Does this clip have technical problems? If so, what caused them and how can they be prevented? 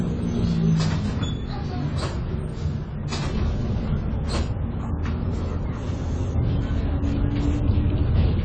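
Yes. Throughout the clip the audio sounds dull and smeared. Nothing is heard above 9 kHz. A warbling, fizzy texture is plainly audible. The likely cause is AAC compression. The encoder cuts the high bands and coarsely quantises the rest, which fits a low bitrate around 24 kbps. To prevent it, encode at a higher bitrate or keep a lossless master for editing.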